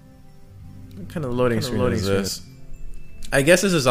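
A doubled audio track runs from 0.64 s to 2.28 s. A second, full-band copy of the sound trails the original by roughly 0.4 s, about 5 dB quieter. It has no decay or room colour. It starts and stops abruptly. Likely cause: a slower second capture path mixed back in.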